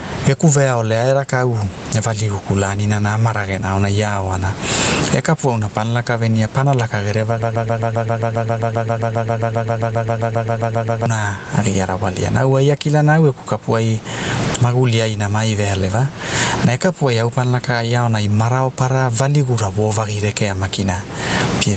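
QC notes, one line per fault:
Throughout, gain pumping: loud and soft parts are squashed closer in level, swinging around 25 dB, likely from gain set too high feeding a fast limiter.
7.42–11.06 s, broken-record loop: a 133 ms snippet repeats back to back, 27 times, likely a stalled stream resending its last fragment, so that stretch of audio is lost.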